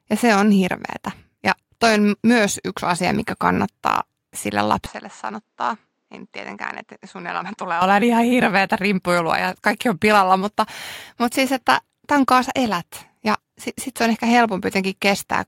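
From 4.86 s to 7.82 s the speech turns dull and boxy, with nothing above 8.4 kHz, drops by roughly 10 dB, and sits over a faint new noise floor, then clears abruptly with no gap at either edge. The likely cause is an input switched to a poorer device and back again. A plain low-pass or codec bandwidth drop would narrow the band but leave level and background unchanged. Here all three shift together.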